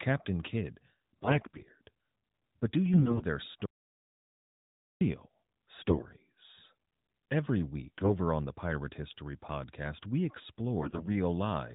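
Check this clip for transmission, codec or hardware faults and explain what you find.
Two faults are audible in this speech clip: repeated bursts of AMR bit errors and one dropout to silence. The narrowband character of the AMR-NB codec can be heard throughout.

AMR bit errors occur at 1.24–1.69 s, 2.94–3.25 s, 5.82–6.07 s, 7.84–8.15 s (just before "on the") and 10.80–11.07 s. In each burst the voice keeps roughly its pitch and loudness but turns hoarse, scratchy and gargly. A weak link flipped the less protected bits in each frame while the check on the critical bits still passed. The excitation pulses landed in the wrong places and the finer pitch, gain and spectral values were wrong. The burst around 2.9 s has the highest error rate, about 20%.

An audio dropout to silence runs from 3.66 to 5.01 s, a gap of about 1.35 s. The sound cuts off abruptly and the gap is silent, with no room tone, before the audio resumes in mid-flow. 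Anything said during it is lost. This pattern most likely comes from the input being lost, through a disconnection, a failed link or an accidental mute, while the recording chain kept writing silence.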